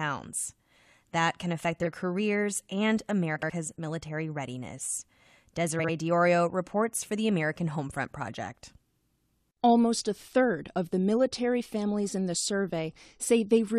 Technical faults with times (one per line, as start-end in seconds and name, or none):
1.82-1.87 frames out of order
3.35-3.50 frames out of order
5.79-5.90 frames out of order